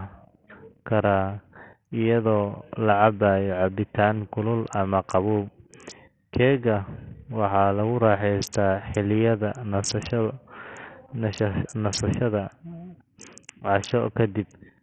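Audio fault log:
throughout Bluetooth SBC compression: treble flickers out under gritty noise, likely a starved bit pool fitting about 48 kbps; spectrogram shows patchy, gapped upper bands.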